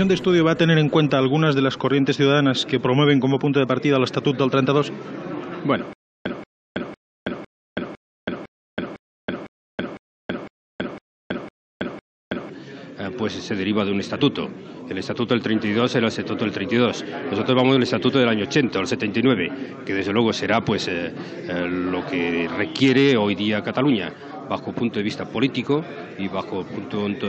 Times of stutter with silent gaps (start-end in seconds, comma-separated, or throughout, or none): 5.93-12.49